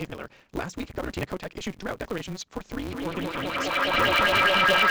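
From the start, a block size mismatch (truncated) drops the tail of every block, leaving a 188 Hz buzz and speech running 1.88 times fast at near-normal pitch, which fits reads of 256-sample blocks.

From 2.82 s to the end, feedback echo between two devices returns the speech roughly every 400 ms, with repeats building to about 11 dB above the speech instead of decaying.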